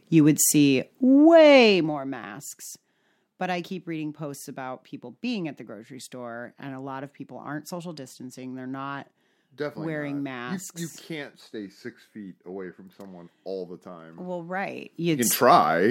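Level changes are applied in unsmoothed 1 dB steps, causing zipper noise: a rapid ticking over the speech during a fade down of roughly 15 dB from 1.56 to 1.99 s and a rise from 14.7 to 15.32 s.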